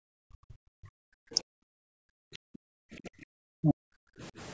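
From 0.0 to 1.06 s the echo canceller clamps the microphone while the loudspeaker plays, so the background is gated, dropping by about 40 dB for roughly a second. At 1.34 to 1.41 s, speech is suppressed in double talk: the canceller likely mistakes the talker for echo during overlap, pulling the voice down by roughly 10 dB for a brief moment. The background is gated again from 1.69 to 2.71 s, by about 40 dB. At 2.99 to 3.07 s a second double-talk suppression likely cuts the voice almost completely, by roughly 40 dB, and at 3.05 to 3.09 s the other side's voice leaks through as a faint scrap around 35 dB below the speech, likely residual echo the canceller missed. From 3.35 to 4.21 s the background is gated by about 39 dB. Within that gated stretch, at 3.62 to 3.74 s, a louder leak of the other side's voice comes through, only about 10 dB under the speech.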